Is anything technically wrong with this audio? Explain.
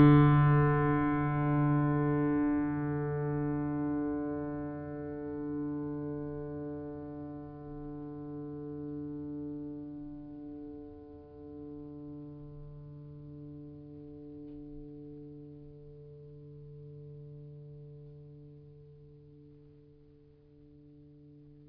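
No, nothing is technically wrong with this music.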